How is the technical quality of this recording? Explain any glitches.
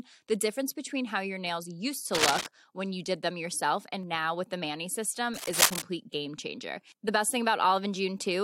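The recording has two brief patches of cable scratch noise. From 2.15 to 2.47 s and again from 5.34 to 5.82 s, harsh rustling scratches sit over the speech, noticeably louder than it. A worn cable or connector being moved is the likely cause, its contact resistance flickering rapidly.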